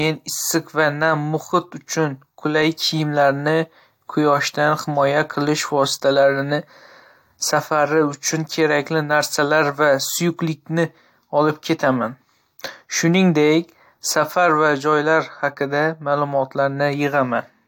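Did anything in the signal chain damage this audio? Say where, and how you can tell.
No, nothing in this speech recording stood out as damage from any stage of the signal chain when I listened.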